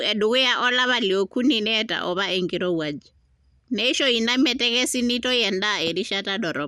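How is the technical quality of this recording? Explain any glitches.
Quality is compromised by audible compression all the way through the speech. The MP2 compression damage sounds dull and gurgly, with nothing above 14.3 kHz, likely from starved sub-bands flickering off, which fits about 80 kbps.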